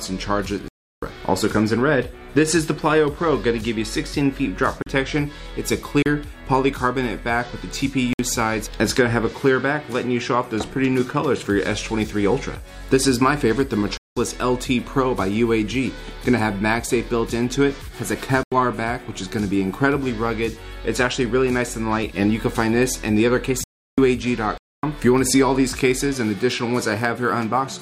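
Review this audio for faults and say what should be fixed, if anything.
Blocks of digital silence cut the audio at 0.68–1.02 s, 4.82–4.86 s, 6.02–6.06 s, 8.13–8.19 s, 13.97–14.17 s, 18.43–18.52 s, 23.64–23.98 s and 24.58–24.83 s, lasting from 34 ms to 341 ms. The sound cuts out and back with no fade. That abrupt, fully silent gap sets it apart from a dropout that fades or is masked by concealment. The longest gaps fit an unfilled 16384-sample buffer and the 85 ms one a 4096-sample buffer, so the output buffer was not filled in time. Enlarging the buffer or giving the audio thread higher priority should stop it.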